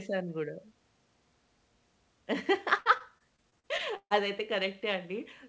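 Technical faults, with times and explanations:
2.78 to 4.12 s: repeated packet loss (robotic sound). Eight gaps, up to 138 ms, are patched by extending earlier sound. The speech turns choppy.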